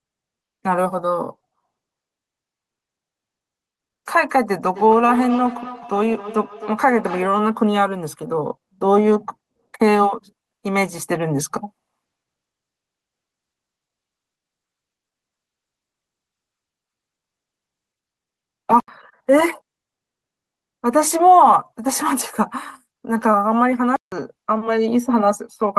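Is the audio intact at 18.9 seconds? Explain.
No. A block of digital silence runs from 18.80 to 18.88 s, ending just before that point: 80 ms of the speech is replaced by silence. It is heard as a short hole with abrupt edges. Unlike a fade or a quiet pause, no noise floor remains.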